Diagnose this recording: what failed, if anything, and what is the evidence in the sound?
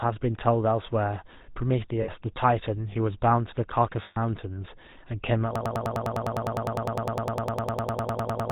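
GSM full-rate codec, throughout the clip, at the codec stage. The speech has a constant buzzy, gravelly roughness, and nothing is present above 4 kHz. That points to the 13 kbps full-rate coder. It reduces the voice to a vocal-tract filter excited by a sparse, regularly spaced pulse train, and it keeps only one excitation sample in three. The damage is plainly audible and shapes every syllable.

Lost GSM frames, at 2.02 to 2.09 s and at 4.02 to 4.18 s, at the network stage. At both points the sound freezes into a short, rough, metallic ring before normal speech returns. The first gap lasts about 60 ms and the second about 140 ms, which fits three and seven missing 20 ms frames. The decoder covered each gap by repeating the last good frame's parameters, and that repetition produces the ringing hold.

Broken-record loop, from 5.56 s to the end. A fragment of about 0.1 s repeats exactly, back to back, for the final three seconds, roughly 29 times in a row. 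The likely cause is a stall in playback or streaming that kept resending the last buffered fragment. Whatever audio should have followed 5.56 s is missing and never resumes before the clip ends.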